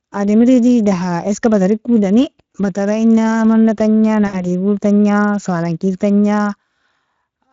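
The speech runs through the Speex codec for the whole clip. This CELP coder has a limited bit budget for the excitation signal, so the sound carries a plainly audible hoarse, grainy roughness, which fits a setting of around 20 kbps.

From 4.27 to 4.36 s, VoIP packet loss concealed by the speech codec takes over. About 60 ms of audio went missing, and the decoder extended its last pitch and filter with falling gain. The result is a brief stretched sound that fades, and the voice stays weak or distorted for a short while after packets return.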